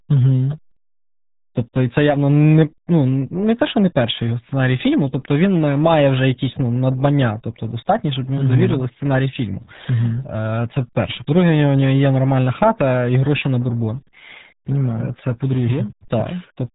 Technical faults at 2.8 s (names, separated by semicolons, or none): RealAudio 14.4 codec